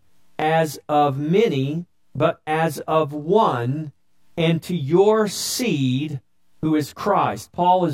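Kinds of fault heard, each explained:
Channel delay (comb filtering): throughout, one channel of the speech lags about 20 ms and sums to mono, cutting evenly spaced notches from around 20 Hz upward, sounding rough or slightly doubled.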